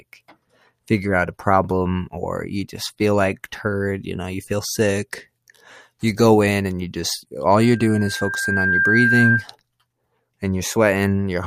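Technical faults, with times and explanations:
7.61–9.47 s, loudspeaker feedback squeal: the microphone re-amplifies its own loudspeaker, and a 1.6 kHz tone swells over roughly a second to about 5 dB above the speech.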